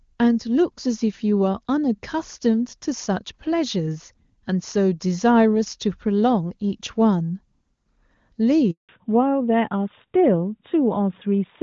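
At 8.71 s the speech cuts out in a handover gap. The call was passed between networks, and no speech frames arrived during the switch. The sound fades within a few tens of milliseconds. Silence follows for 180 ms, until 8.89 s.

From 8.89 s to the end, the call shows a fallback to narrowband. Before this, the HD Voice speech is clear, consistent with AMR-WB at 23.85 kbit/s. After it, nothing remains above 4 kHz. The voice turns duller and rougher, which points to AMR-NB at 12.2 kbit/s.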